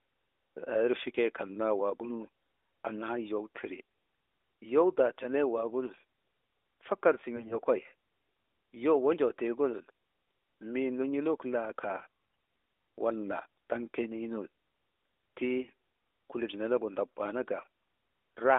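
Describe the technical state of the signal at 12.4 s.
At 12.4 s the signal is inside a burst of AMR bit errors running from 12.20 to 12.48 s, which fits about fourteen 20 ms frames. Roughly one bit in twenty of the less-protected codec data arrives flipped, misplacing excitation pulses and skewing fine pitch, gain and spectral values. Pitch and level hold, but the sound turns hoarse, scratchy and gargly within the narrowband AMR channel.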